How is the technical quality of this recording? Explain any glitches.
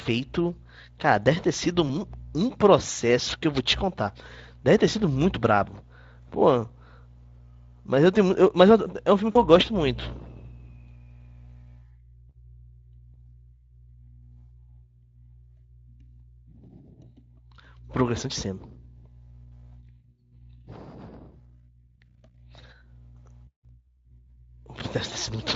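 There are two short dropouts in the speech, both VoIP packet loss concealed by the speech codec. They sit at about 1.87 to 1.95 s, where roughly 20 ms went missing, and 9.31 to 9.37 s, where about 40 ms went missing. In each, the decoder stretches its last pitch and filter into a brief fading buzzy tone or coloured noise, and the voice stays a bit weak just afterward. The Speex coding underneath is only lightly coloured, which fits a fairly generous quality setting.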